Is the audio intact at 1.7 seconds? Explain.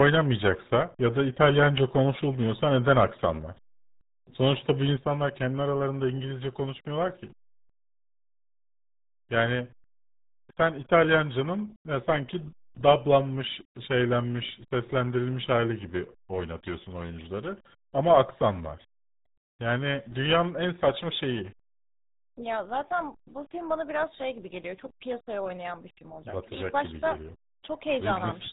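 No. At 1.7 s, as across the whole clip, the speech carries heavy RealAudio 14.4 codec damage. This low-rate speech codec, which fits an 8 kbit/s stream, discards everything above 3.8 kHz. The voice sounds muffled and gargly.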